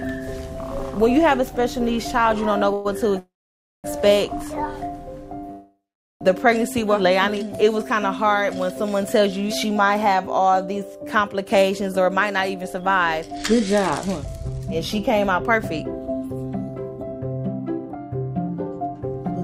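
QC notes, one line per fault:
2.73–2.87 s, 3.19–3.86 s and 5.51–6.23 s, call audio freeze: the last sound is stretched into a fading buzz, lasting 0.11 s, 0.65 s and 0.69 s. The two longer ones decay to silence for 0.56 s and 0.43 s. Likely packets stalled and the jitter buffer ran dry. Unlike a dropout, the audio resumes exactly where it stopped, so nothing is lost and each freeze adds delay.
11.44–19.35 s, jitter buffer speed-up: the sound plays at about 109% speed, rushed but at unchanged pitch. This distinguishes it from a resampling or pitch error. Short pitch-period slices, roughly 0.7 s in total, are trimmed to cut the extra delay held in the buffer.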